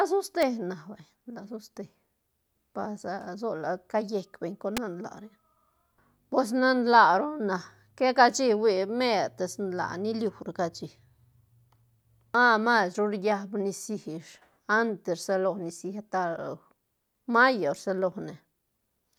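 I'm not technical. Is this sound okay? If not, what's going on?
No. There are two sharp snaps at 0.42 s, just before "na vay," and at 4.77 s, right after "beñ con," the second one louder. This is an electrical switching spike, likely from a nearby switch or static. The speech continues underneath each snap rather than cutting out.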